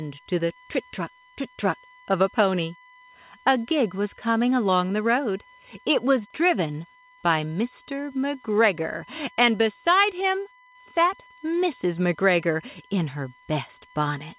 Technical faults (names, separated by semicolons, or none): USB whine